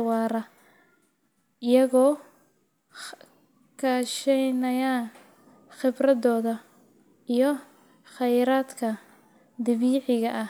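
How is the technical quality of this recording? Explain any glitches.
The recording's signal has no technical glitches; it stays continuous and intact throughout.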